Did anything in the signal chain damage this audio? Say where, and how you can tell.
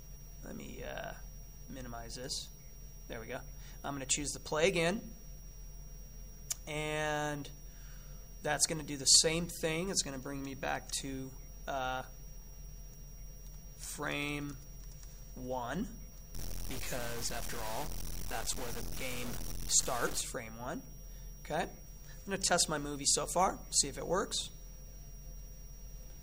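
Yes. Low bit depth without dither, 16.34 to 20.21 s: grainy distortion tracks the sound near signal level, likely from sample-format truncation to 5 bits.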